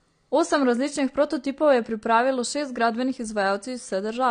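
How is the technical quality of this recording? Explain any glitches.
The quality is limited by one fault that runs through the whole speech clip: low-bitrate audio saved at a high bitrate. The recording was likely passed through a heavily compressed encoder first and later re-saved as a large, high-bitrate file, which can't recover what the first pass discarded. You can hear it as a hard ceiling near 9.6 kHz, with nothing above it, so sibilants and breaths sound dull and lack air. The artefacts of the earlier encoding also remain, which fits a first pass at a low bitrate, around 32 kbit/s.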